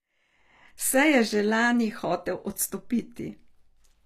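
A speech recording carries plainly audible HE-AAC compression from start to finish. Instead of simply losing its top end, as ordinary low-bitrate coding would, the treble stays present up to a hard ceiling near 14.9 kHz, but it sounds synthetic: sibilants come out gritty and metallic because the upper bands are rebuilt from copied lower ones. The damage fits a bitrate around 24 kbps, likely from spectral band replication.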